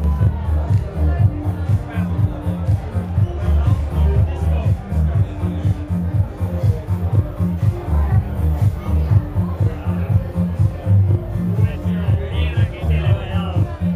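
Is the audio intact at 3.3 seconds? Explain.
No. At 3.3 seconds, as across the whole clip, the sound is doubled, with a second copy trailing the first at equal level like a tight slap echo. This is channel delay (doubling): one channel runs 40 ms late, and summing both to mono exposes the lagging copy.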